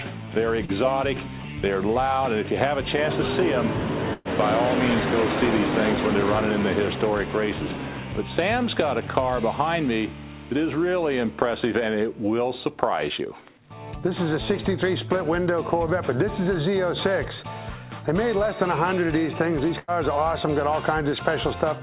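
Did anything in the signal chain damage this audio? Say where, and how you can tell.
Yes, the damage happened on the network, ahead of the receiver's decoder. At 0.65 to 0.71 s there is short concealed packet loss. About 30 ms of audio never arrived in time. The receiver covered the hole with 32 ms of invented continuation, extending the last sound, then crossfaded back into real audio. You hear a brief smear or wobble there. Above 4 kHz the band is empty throughout, consistent with a narrowband call codec.

Two bursts of packet loss are also on the network. The first runs from 4.13 to 4.28 s. About 120 ms is missing. The receiver stretched the previous sound for 116 ms, fading it down, and then leaves about 20 ms of silence before resuming. The second spans 19.79 to 19.91 s, with 90 ms missing and 88 ms of filler. Each sounds like a held buzz or fading hiss, then a jump forward.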